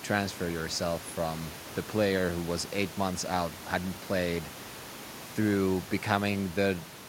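No technical faults are audible.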